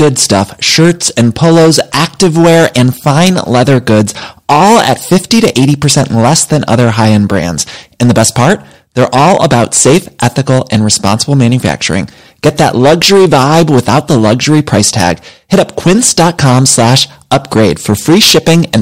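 Hard clipping runs through the whole of this speech clip, from start to finish. The signal reaches the stage that flattens it about 10 dB hotter than that stage can pass, so the peaks are sheared off square, and around a tenth of the samples end up pinned at the limit. Those flat tops generate harmonics high above the original content, heard as a harsh, gritty fuzz riding on every louder syllable.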